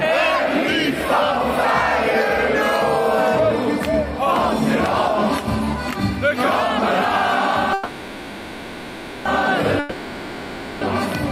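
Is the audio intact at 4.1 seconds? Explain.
Yes, the audio is intact at 4.1 seconds, with no dropout, click, distortion or other fault audible at that moment.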